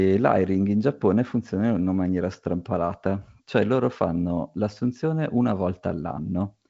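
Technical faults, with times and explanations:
No technical faults are present in this speech clip. The G.722 wideband telephone coding works as intended, with nothing above about 7.8 kHz and a faint hiss in the upper band.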